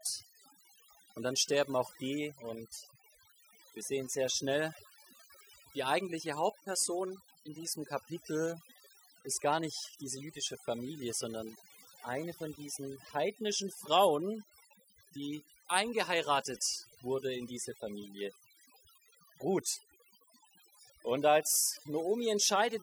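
From start to finish, the speech carries overdone noise removal. A noise reduction stage was pushed too hard on a noisy recording. It cuts individual frequency bands deep whenever they sit close to its noise estimate. Quieter parts of the voice fall below that line and vanish with the noise. The pauses drop to near silence, dotted with brief twinkling specks.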